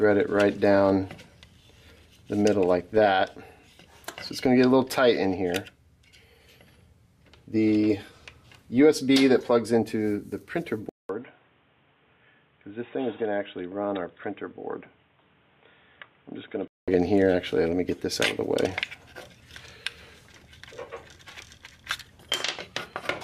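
At 10.89 s a 200 ms gap gives way to narrowed sound, about 10 dB quieter, with nothing above 3.8 kHz and noise roughly 35 dB down, until 16.88 s. New noise and level, not only lost treble, suggest the input was likely switched to a poorer device.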